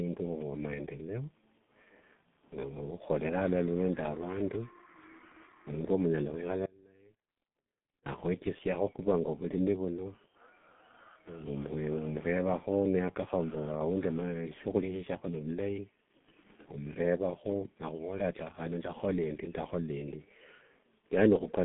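From start to finish the speech carries heavy G.723.1 codec damage. The line passes roughly 150 Hz to 3.5 kHz, and the codec's coarse, slowly updated voice model fits its 6.3 kbit/s mode. The result sounds muffled and hoarse, and consonants smear together. On a spectrogram, energy stops at a flat ceiling near 3.7 kHz with nothing above it, and harmonics look blocky and blurred from frame to frame.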